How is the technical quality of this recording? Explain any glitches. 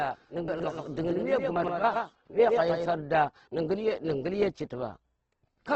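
The recording has three clear technical problems: coarse codec damage throughout, a trailing duplicate in the first few seconds, and two short jumbled passages.

Opus compression: for the whole clip the speech sounds grainy and rough, with nothing above 8.2 kHz. That is likely heavy Opus coding at a low bitrate around 12 kbps.

Doubled audio track: from the start until 2.86 s a second full-band copy trails by roughly a tenth of a second, a few dB quieter. It then stops abruptly, likely from a duplicate capture path.

Chunks out of order: from 0.48 to 0.64 s and from 1.56 to 1.68 s, short slices play after the material that should follow them. The sound is garbled, which fits roughly 40 ms blocks arriving late.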